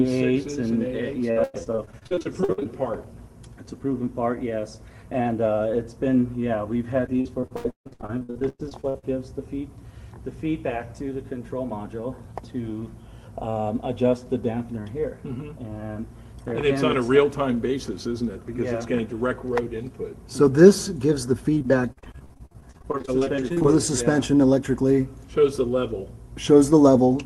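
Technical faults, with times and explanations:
1.31–2.66 s, repeated packet loss (robotic sound): packets kept arriving late or not at all, and each hole was patched by stretching out the preceding sound. With about 38% of the stretch filled this way and holes up to 98 ms, the sound turns choppy and robotic.
7.06–9.04 s, repeated packet loss (robotic sound): the same cycle of loss and concealment covers about 43% of this span. Holes reach 150 ms, so pieces of sound drop out.
21.54–23.66 s, repeated packet loss (robotic sound): the holes here are shorter, none longer than 50 ms, but they come close together. Concealment fills about 29% of the span, which leaves a rapid, stuttering choppiness.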